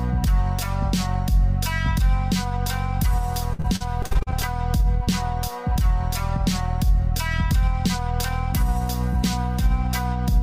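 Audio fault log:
3.53–4.45 s, repeated packet loss (robotic sound): about ten short dropouts arrive in quick succession, the longest around 53 ms, together removing roughly 0.3 s of audio. Each hole is patched by extending the sound just before it, so about a third of this stretch is synthetic continuation rather than real signal. The rapid alternation of genuine and repeated fragments produces the choppy, robotic texture, with pieces of the sound missing.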